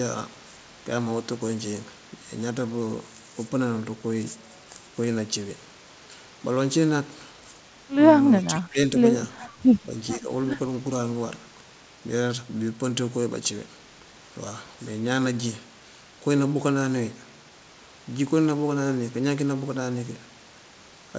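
A speech recording carried over a call path that ends at about 8 kHz, which fits a wideband codec such as G.722. It shows speech suppressed in double talk, likely from an echo canceller that could not tell the near talker from loudspeaker echo while both sides spoke and so attenuated everything. The voice dips by about 20 dB from 8.51 to 8.78 s, and by about 10 dB from 10.2 to 10.3 s. An echo leak, likely residual loudspeaker pickup that the far-end canceller failed to remove and sent back, adds a faint delayed copy of the voice, trailing by 437 ms. It is very quiet from 9.4 to 9.5 s and slightly stronger from 10.1 to 10.16 s.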